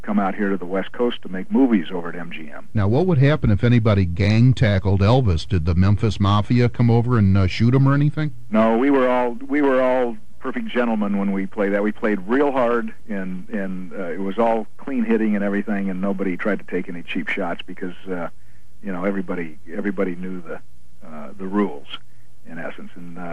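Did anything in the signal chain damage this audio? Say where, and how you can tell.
Yes, at the codec stage: MP2 compression throughout, with a dull top, flickering bands and gurgly granular grit, likely a low bitrate around 80 kbps starving the upper sub-bands.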